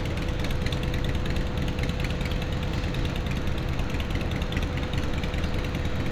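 No technical faults can be heard anywhere in these everyday sounds, and the signal holds steady throughout.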